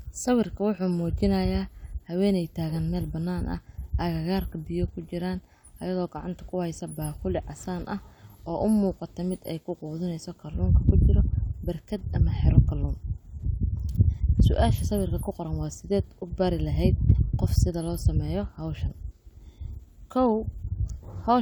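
No technical fault can be heard anywhere in this speech recording: the signal stays continuous and steady, with nothing interrupting or degrading it.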